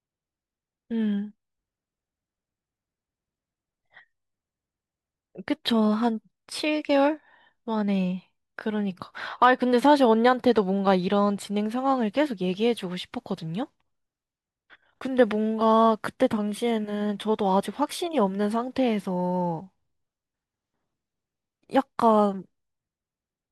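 There are no technical faults to describe at any point in the recording.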